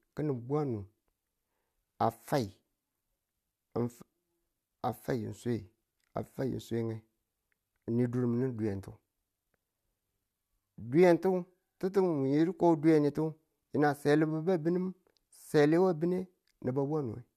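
No technical faults are audible anywhere in the speech.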